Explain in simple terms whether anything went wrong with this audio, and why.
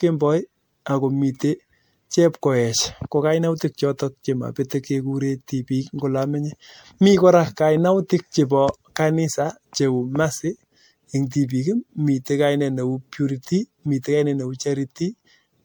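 The speech was most likely saved in a compressed format, then reopened and re-saved about seven times. This is generation loss: each save discards a bit more detail, so throughout the clip the speech sounds swirly, hollow and smeared, with blurred sharp starts.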